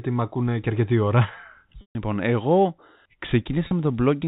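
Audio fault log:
1.81–1.95 s and 3.67–3.71 s, packet loss with pitch repetition: after "ακούνε και αρκετή ώρα" a buzzy held tone fades toward silence, then briefly buzzes again; lost 140 ms and 40 ms stretches were bridged by repeating the last pitch period.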